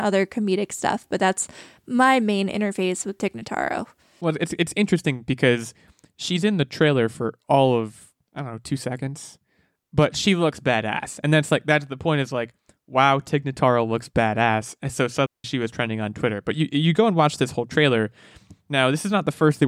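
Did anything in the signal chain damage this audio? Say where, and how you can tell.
Yes. A digital wireless dropout at 15.26 s mutes the speech for about 180 ms, ending at 15.44 s. The receiver lost too much of the radio link and muted with a very short fade. That shows as a clean gap of near silence with no noise burst on either side. On a waveform it is a flat stretch, and on a spectrogram a blank vertical band.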